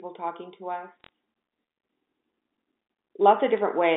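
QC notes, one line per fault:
1.01–1.09 s and 3.58 s, bit errors on a digital phone line: short bursts of sharp ticks and crackle sit on top of the speech, a cluster across the first span and a brief one at 3.58 s. Each flipped bit in the 8-bit logarithmic telephone stream corrupts one sample. Hits on the sign or upper bits throw that sample far off the waveform and produce the tick. The error rate points to roughly one or two bits in a thousand during those moments. The band-limited telephone sound itself, cut below 200 Hz and above 3.7 kHz, is heard alongside.
1.90 s to the end, sudden gain jump: the level steps up by about 6 dB between one sample and the next and stays there. The speech and the background noise rise together, which places the change in the signal path rather than in the talker. The likely cause is a digital gain setting or a one-bit shift applied at once with no ramp. 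That abrupt step can leave a click at the point of change.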